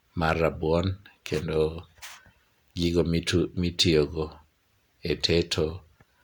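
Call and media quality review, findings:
No faults found on the speech signal; the audio path shows no dropouts, clipping, timing errors or level anomalies.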